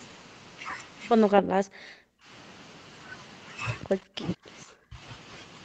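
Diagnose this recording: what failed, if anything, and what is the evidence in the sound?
Call processing: speech collapses by up to about 40 dB at 1.29–2.3 s and 3.87–5.0 s, leaving near-blank spectrogram columns, likely speech suppressed in double talk by the echo canceller.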